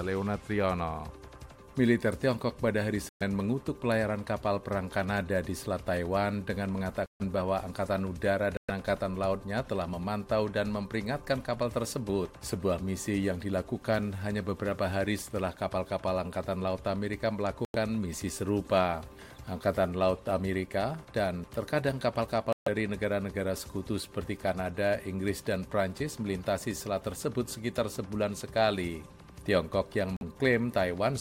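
At 3.09 s the audio drops abruptly into silence for 0.13 s. The same hole returns at 7.06 s for 0.16 s, 8.57 s for 0.13 s, 17.65 s for 0.11 s, 22.53 s for 0.16 s and 30.17 s for 0.06 s. Each is a corrupt frame muted. Damaged compressed frames were rejected by the decoder and replaced with silence. The gap lengths fit runs of frames about 26 ms long. Timing stays intact around every gap.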